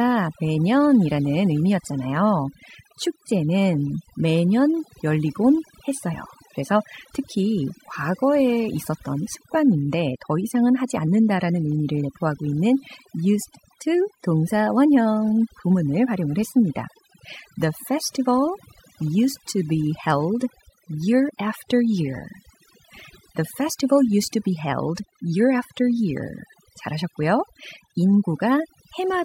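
From start to finish there's overdone noise removal: the denoiser was pushed too hard, gating whole frequency bands, so quiet parts of the speech drop out over a twinkly, near-silent background.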